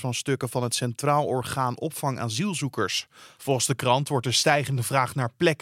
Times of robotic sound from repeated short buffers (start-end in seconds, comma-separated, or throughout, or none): none